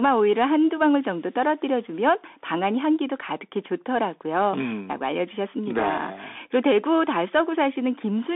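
From start to finish the speech carries the Bluetooth CVSD headset codec sound: a narrow 250 Hz to 3.6 kHz band with nothing above 3.8 kHz, scratchy s sounds where the one-bit up/down steps can't keep pace, and a granular hiss underneath, which fits a 64 kbps headset link.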